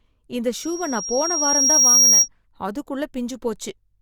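From 0.56 to 2.28 s, a loudspeaker feedback squeal swells over roughly a second and a half into a piercing 5.6 kHz tone about 10 dB above the speech. On a spectrogram it shows as a thickening horizontal line.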